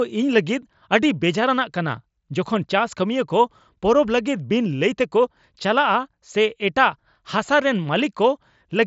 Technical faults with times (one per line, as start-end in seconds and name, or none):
none